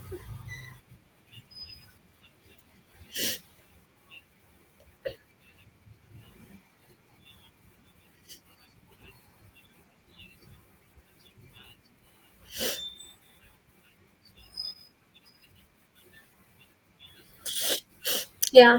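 Nothing technical goes wrong anywhere in this bit of speech, so there's simply no fault to point to at any moment.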